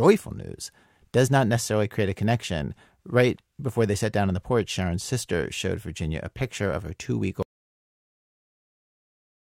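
At 7.43 s the speech cuts off into dead silence with no room tone, through to the end: an audio dropout to silence, likely from lost input.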